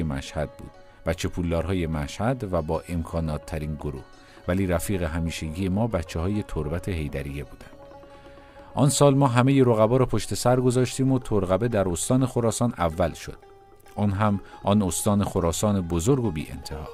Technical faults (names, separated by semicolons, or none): sample clock jitter